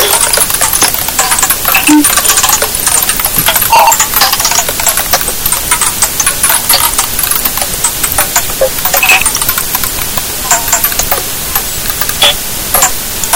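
From start to finish the sound suffers hard clipping. It was driven about 45 dB past what a stage could pass, so peaks are sheared flat. Around a tenth of the samples hit the ceiling. Every loud moment turns into harsh, buzzing fuzz.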